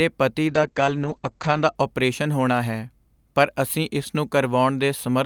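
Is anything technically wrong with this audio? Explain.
Yes. From 0.49 to 1.81 s, a call bitrate drop cuts the encoder from 48 to 9 kbps, narrowing bandwidth from 20 kHz to 8 kHz, leaving speech muffled and coarse.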